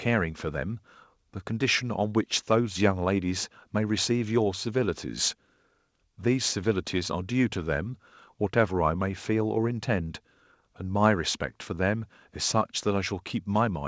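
Nothing goes wrong anywhere in this speech, which simply carries the top-end cutoff you'd expect from a wideband call path, with nothing audible above 8 kHz.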